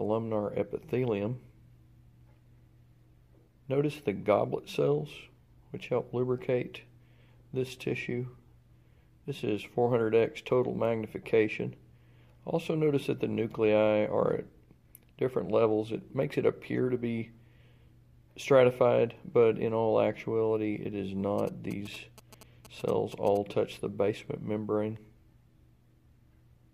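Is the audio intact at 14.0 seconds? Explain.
Yes, the audio at 14.0 seconds is intact, with no dropout, click, distortion or other fault at that moment.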